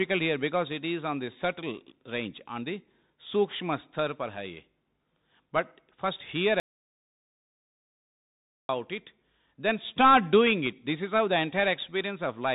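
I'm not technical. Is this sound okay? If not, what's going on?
No. The whole recording sounds as though it came through a Bluetooth headset using the CVSD headset codec. This phone-call format keeps nothing above about 3.8 kHz, so the speech sounds thin and boxy. Its crude one-bit coding can't keep up with sharp, loud sounds, so s sounds come out scratchy and a gritty hiss sits under everything. Unlike a plain muffled recording, you hear this roughness as well as the missing treble.

There is also an audio dropout to silence from 6.60 to 8.69 s, just over two seconds, right after "first hear". The sound stops dead and returns at "it then start doing", and whatever was said in between is lost. The gap is total silence with no background noise at all, which is what separates it from someone simply pausing. The likely cause is that the input briefly disconnected or was muted while recording carried on.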